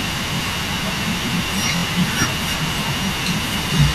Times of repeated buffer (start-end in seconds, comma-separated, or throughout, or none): 0.37-0.39, 1.76-1.83